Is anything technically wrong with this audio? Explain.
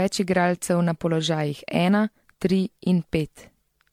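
Yes. Throughout this speech clip there is generation loss: the sound is swirly, hollow and smeared, with blurred consonant attacks, likely from roughly ten passes through MP3 near 96 kbit/s. A spectrogram shows patchy holes and smeared onsets.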